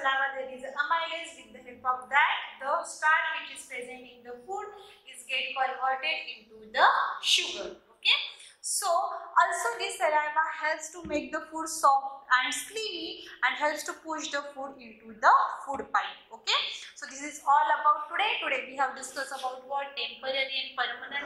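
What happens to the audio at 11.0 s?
Nothing goes wrong at 11.0 s; the audio plays through that moment intact, with no dropout, click, distortion or other fault.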